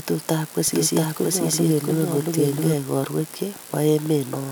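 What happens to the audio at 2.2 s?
A doubled audio track runs from 0.68 to 2.74 s. The speech is heard twice, a copy trailing about 0.7 s behind at similar level, likely from a second, slower capture path.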